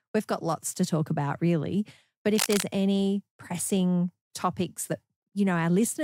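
At 2.35 s a burst of cable scratch noise cuts across the speech and lasts until 2.64 s, roughly 0.3 s in all. It is dense, irregular crackle and rustle sitting only a few decibels below the speech level, so it competes strongly for that moment. The likely cause is a worn cable or connector being moved, its contact resistance fluctuating rapidly and injecting uneven bursts of noise into the signal path.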